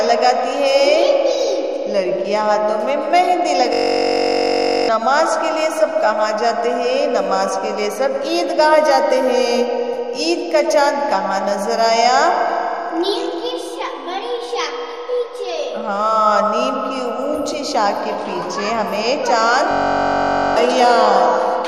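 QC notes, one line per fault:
3.73–4.89 s and 19.71–20.57 s, system hang loop: the sound abruptly turns into a steady buzz pitched near 47 Hz, lasting about 1.2 s and then 0.85 s, before normal audio resumes with roughly a second missing each time. A freeze left the sound hardware replaying the same 21.33 ms slice over and over, which fits a 1024-sample ring buffer. That very short loop repeats fast enough to fuse into a tone rather than a stutter.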